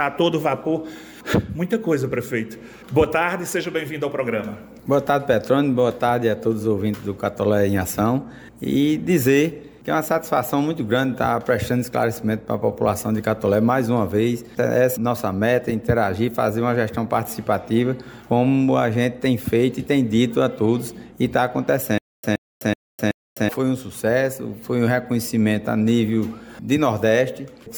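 Playback likely stalled from 21.98 to 23.49 s, replaying its last fragment at each retry before running empty. This stutter with silent gaps repeats a 125 ms burst four times, each followed by 252 ms of digital silence, a steady 377 ms cycle. The audio due in that span is lost.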